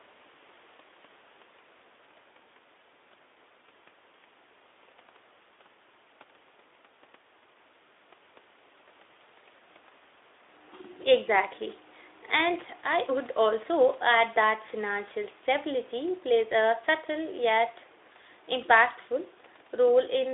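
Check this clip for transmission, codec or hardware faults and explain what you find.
Nothing in this one stands out as a problem: the speech comes through the narrow, phone-like Speex line just as you'd expect from that kind of connection.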